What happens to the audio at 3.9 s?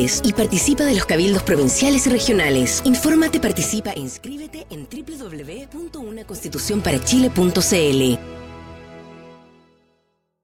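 Zipper noise runs from 3.52 s to 4.26 s, so 3.9 s falls in the middle of it. Here the level drops by about 15 dB, but in discrete steps of about 2 dB, roughly ten per second, instead of a continuous glide. Each abrupt jump puts a tiny discontinuity in the waveform, and those small clicks string together into a ticking, zipping texture that rides on the sound for as long as the level is moving.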